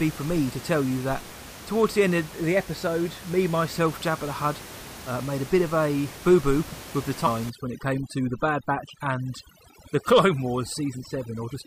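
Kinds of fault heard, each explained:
Overdone noise removal, from 7.50 s, after "boo boo with the", to the end: an over-strong noise reducer shuts off frequency bands near its noise estimate, so room noise about 16 dB under the speech drops to twinkling near-silence, and quieter speech detail vanishes.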